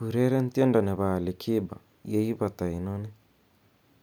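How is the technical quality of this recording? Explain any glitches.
No glitches turn up anywhere in this speech recording. Nothing breaks the flow of the sound at any point, so there is no fault to explain.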